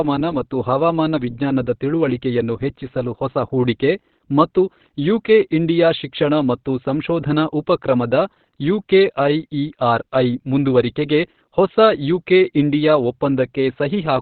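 Opus compression throughout: nothing above 4.5 kHz, speech muffled and hoarse, likely the codec's narrowband speech mode at a bitrate that fits about 12 kbps.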